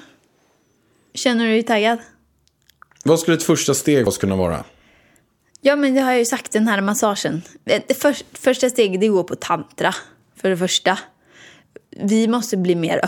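A speech clip in which the decoder skipped compressed frames: at 4.07 s roughly one whole frame never reached playback, so about a tenth of a second of audio drops out. The jump fits a frame length near 93 ms.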